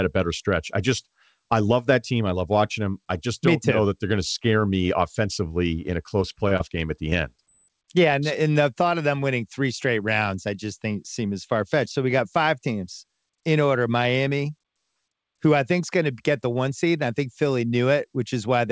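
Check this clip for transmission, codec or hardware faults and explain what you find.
Two kinds of packet-loss fault appear, both close together in the middle of the speech. The call path itself is clean: the audio stops sharply at 8 kHz, consistent with a wideband codec such as G.722 at 64 kbps.

From 6.20 to 6.72 s there is repeated packet loss with a robotic sound. Four short holes, the longest about 30 ms and roughly 90 ms in total, fall within half a second. The receiver patches each one by extending the preceding sound, so about 17% of that stretch is synthetic. Because the patches come in quick succession, the speech turns choppy, with pieces clipped out.

Short concealed packet loss follows twice, at 7.11 to 7.13 s and at 7.38 s. Each time about 10 ms of audio failed to arrive before playout. The decoder filled the gap by continuing the last waveform, pitched if voiced and noise-like if not, then cross-faded back into the received signal. 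Each event is heard as a brief smear or wobble. Because a quick consonant is so short, it can drop out.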